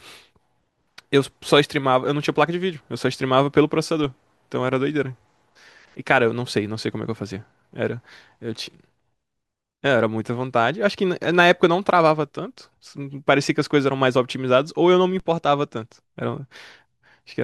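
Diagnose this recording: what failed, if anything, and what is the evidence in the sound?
A low, dull thump cuts under the speech twice, at 4.04 s and 15.20 s, while the speech carries on untouched. These are DC steps: the waveform's zero line jumps suddenly by about -28 dBFS, the kind of shift a converter recalibrating or an offset input being switched in produces at the converter stage. The step doesn't hold; it drains away as a 20 Hz high-pass pulls the baseline back, so each event leaves only that brief thump.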